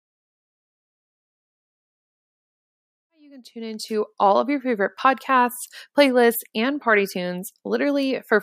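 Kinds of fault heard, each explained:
No faults are heard.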